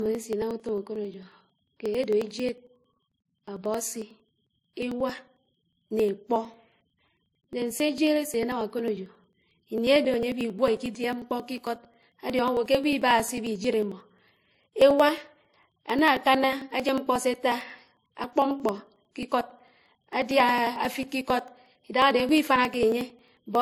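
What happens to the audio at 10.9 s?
Right at 10.9 s you're in the middle of a run of periodic USB or driver dropouts that goes from about 0.06 s to 23.55 s. Every 0.09 s, so roughly eleven times a second, something stalls the audio path and about 10 ms of audio simply gets skipped, with no silence patched in. Around 10.9 s that comes across as a steady ticking or popping under the speech, and it's only audible while there's signal to break up.

Layered on top of that, and present the whole way through, there's a cut-off with nothing above 15 kHz, plus two different flavours of compression grit heard together. That's most likely transcoding between lossy codecs. It sounds like a low-bitrate MP3, somewhere near 38 kbit/s, re-encoded to WMA at around 64 kbit/s. The second encoder wastes its bits reproducing the first one's artefacts, adds its own on top, and the lost top end never returns.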